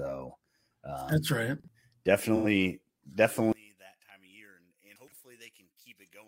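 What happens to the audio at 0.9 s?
Nothing goes wrong at 0.9 s; the speech there plays through cleanly, with no dropout, click, distortion or other fault.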